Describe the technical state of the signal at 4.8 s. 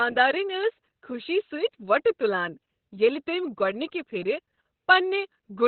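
At 4.8 s the speech is still under the Opus voice compression heard across the whole clip. The band stops sharply near 4.3 kHz, which fits SILK running narrowband at a very low bitrate of around 8 kbps, with the excitation coded coarsely. The voice sounds muffled, hoarse and slightly robotic. On a spectrogram, the energy ends at a flat ceiling with nothing above it, and the harmonics below look smeared and grainy.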